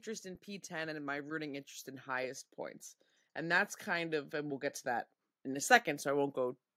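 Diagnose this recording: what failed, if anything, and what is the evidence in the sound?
Automatic gain rising, from 0.05 to 2.53 s and again from 3.34 to 6.65 s, points to the call-processing stage. In each span the speech and the background noise floor swell together by about 5 dB over a couple of seconds. The AGC judged the input too quiet and ramped its gain up slowly, so everything in the signal rose at once. After the gap between the two ramps, the same climb repeats.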